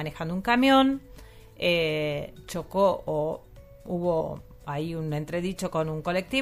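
At about 4.2 s the audio jumps forward with a short smeared blip rather than a sharp click, losing around 150 ms of material. This is compressed frames skipped: about seven whole frames were never decoded, and the jump size fits a 26.1 ms frame.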